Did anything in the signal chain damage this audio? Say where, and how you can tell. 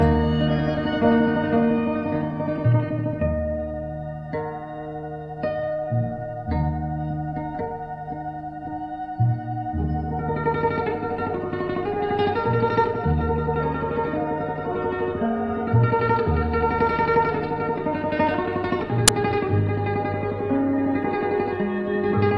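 Yes. File tags played as audio, at 19.08 s: a click-length burst of very loud white noise with hard edges on both sides cuts through the sound. The fault sits at the storage and playback stage. The player or decoder misread the file's layout and fed an embedded cover picture to the output as if it were samples. Because that image data is already compressed, its bytes look random, so they come out as flat, very loud static rather than a tone or a rasp.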